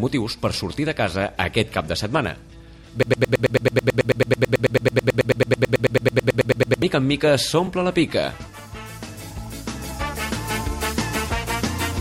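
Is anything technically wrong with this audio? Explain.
Yes. From 3.03 s to 6.82 s there is a broken-record loop: playback or the stream likely stalled and kept resending the last fragment it held. A 109 ms slice repeats exactly, back to back, 35 times, and the audio due in those 3.8 seconds is lost.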